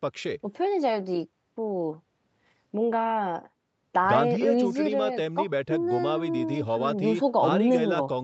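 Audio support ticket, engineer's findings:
No faults found in this speech clip; it carries the normal character of a call path, with the microphone's high-pass trimming the deepest bass and the Opus codec at 48 kbps limiting content to 8 kHz, both working as intended.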